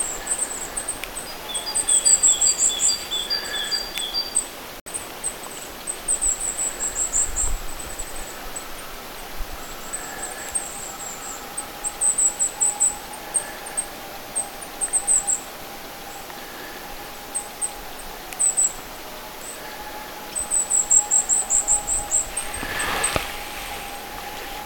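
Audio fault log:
4.80–4.88 s, Bluetooth dropout: the sound cuts to silence for about 80 ms, then returns further along rather than where it stopped, so a short slice of the audio is missing. The likely cause is packets on the wireless link to the headphones arriving too late and being discarded, leaving the output empty until valid data resumed. A gap of this length fits roughly three lost packets.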